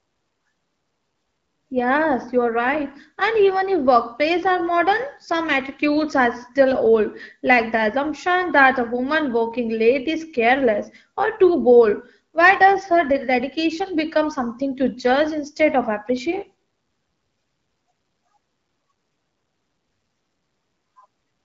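There are no technical faults to describe at any point in this speech, which is carried over an AMR wideband (HD Voice) link at 12.65 kbit/s.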